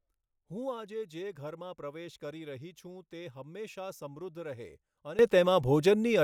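At 5.19 s the level leaps up by about 17 dB and stays there to the end. This is a sudden gain jump. The speech and its background noise rise together. The likely cause is a digital gain change applied without a ramp.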